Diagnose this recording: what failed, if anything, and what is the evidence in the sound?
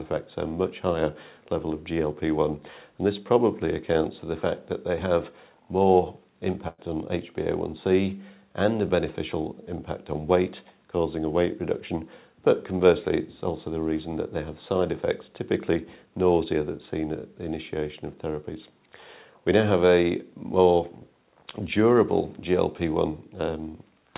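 Network stage: a burst of packet loss from 6.68 to 6.80 s dropped about 100 ms; the receiver stretched and faded the preceding sound, then resumed further on.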